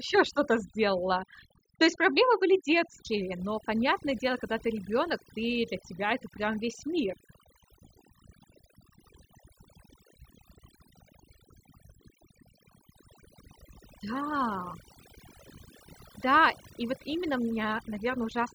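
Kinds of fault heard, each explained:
Overdone noise removal: noise reduction set too strong throughout this speech clip, pulling frequency bands down whenever they sit near the noise estimate. Quieter parts of the voice are cut with the noise, leaving a background that drops and breaks up into twinkling specks.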